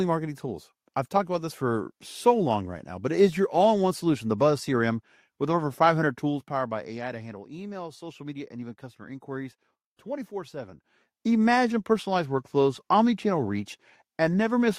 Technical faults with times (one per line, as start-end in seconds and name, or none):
none